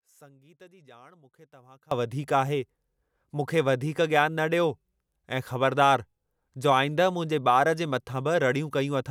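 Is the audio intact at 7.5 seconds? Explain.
Yes, the speech at 7.5 seconds is intact, with no fault to be heard at that moment.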